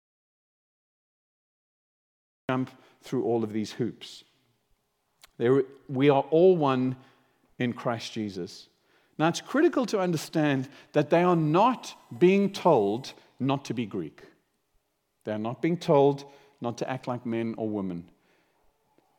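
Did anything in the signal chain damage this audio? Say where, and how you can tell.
Yes. The clip opens in an audio dropout to silence lasting until 2.49 s: pure silence with no room tone, unlike a natural pause, likely from a lost input link.

USB whine sits from 11.15 to 13.15 s in the analogue power or ground: a steady 1 kHz-series tone, strongest at 2 kHz, faint around 40 dB down, fixed-pitch and far higher than mains hum.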